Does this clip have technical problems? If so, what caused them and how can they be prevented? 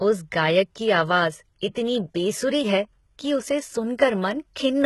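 Yes. Throughout the speech, the treble sounds bright but synthetic. The s sounds are gritty and lispy, and nothing is present above 11.8 kHz. This is likely HE-AAC compression, which copies lower bands upward to fake the treble. The heavy damage fits a bitrate near 16 kbps. To prevent it, encode at a higher bitrate or with a codec that codes the full band directly.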